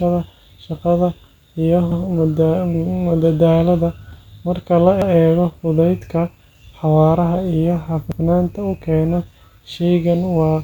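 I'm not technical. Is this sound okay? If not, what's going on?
No. This is overlapping chunks: the speech stutters at 1.92, 5.02 and 8.12 seconds. Each 3-second piece restarts early, repeating a tenth of a second.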